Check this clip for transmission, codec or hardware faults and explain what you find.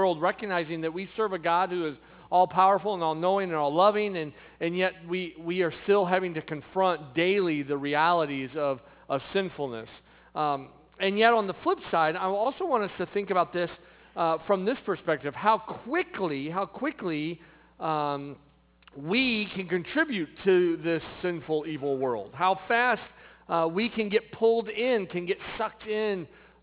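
There's one fault here, and it runs the whole way through: aliasing.

From start to finish, content that was above 4 kHz has been folded back down below it. The spectrum points to the audio having been brought down to an 8 kHz rate without a proper anti-alias filter first, so anything above the new 4 kHz limit mirrored back into the band as unrelated frequencies. Those folded components sit around 20 dB under the wanted sound, giving high-frequency detail a gritty, metallic edge, with energy running right up to 4 kHz.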